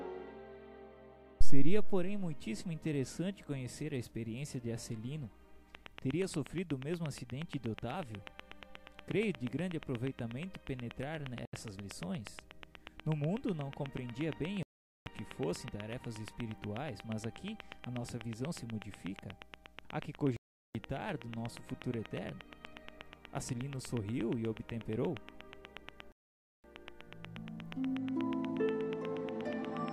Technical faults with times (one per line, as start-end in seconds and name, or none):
5.75-29.89 train of clicks
11.45-11.54 Bluetooth stall
14.63-15.06 Bluetooth stall
20.36-20.75 Bluetooth stall
26.12-26.64 Bluetooth stall